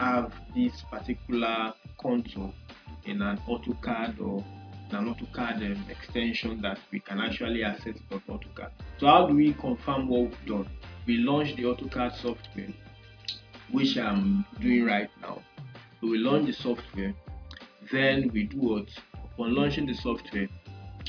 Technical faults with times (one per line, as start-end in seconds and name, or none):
none